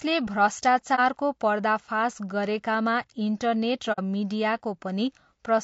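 A speech recording with plainly audible low-delay AAC compression throughout: the voice sounds rough and grainy, with noise filling the gaps between pitch harmonics and an upper band that sounds thin and synthetic. This is likely from a codec such as AAC-ELD working at around 32 kbps, where too few bits leave the spectrum coarsely quantized. On a spectrogram the harmonic stripes look smeared, with speckled energy between them and a patchy top band. There are also two cases of AAC frame loss with muting, where lost frames were decoded as silence. The first runs from 0.95 to 0.99 s, just before "पर्दाफास गरेकामा", and fits a single lost frame of about 30 ms. The second runs from 3.92 to 3.99 s and fits two lost frames, about 60 ms. The first is a brief dip and the second a soft-edged gap. In the waveform the amplitude tapers down and back up again, and on a spectrogram each shows as a narrow vertical blank band.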